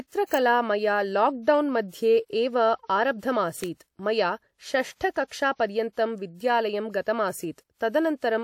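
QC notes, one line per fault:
0.34 s and 3.64 s, electrical switching spike: each is a sharp snap lasting only a millisecond or two, sitting on top of the speech rather than replacing it. The cause is likely a switch, motor or static discharge near the recording chain, with the resulting arc induced into the audio line as a brief transient that the signal path passed straight through.
5.27 to 5.31 s, pre-echo: a short hiss runs for about 39 ms ahead of a sharp attack, and the onset itself sounds softened and smeared. A transform codec has spread quantisation noise across a whole block, sizing it for the loud attack near the block's end. That noise therefore also fills the quiet stretch before the attack, where nothing in the signal masks it.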